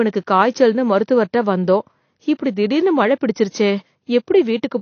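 A short speech recording carries plainly audible AAC compression damage from start to finish. Nothing reaches above about 6.5 kHz, so the top end sounds dull and sibilants lose their crispness, while the remaining upper bands have a smeared, fizzy, warbling texture. The likely cause is AAC-LC coding at a low bitrate, consistent with roughly 32 kbps, where the encoder drops the high band and quantises what remains coarsely.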